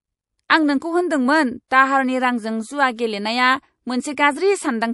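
Throughout the speech there is a watery, swirling quality with smeared consonant attacks and dulled treble. This is likely MP3 compression at a low bitrate, near 48 kbps, where the encoder trims high frequencies and lets weak spectral lines flicker on and off between frames.

A hiss runs just ahead of a sharp onset from 1.68 to 1.71 s, right after "आं नोंखौ होन्दोंमोन" and before "दाहारनि रांजों जुआ गेलेनाया". It lasts 31 ms and rises about 21 dB above the quiet before it. A second, similar smear of 29 ms, about 17 dB up, comes at 2.96 to 2.99 s, just after "होन्दोंमोन दाहारनि रांजों जुआ". Both are pre-echo: quantisation noise spread across a long transform block, apparently around 48 ms, reaches back before each attack. The encoder seems never to switch to short blocks, which would have confined that noise.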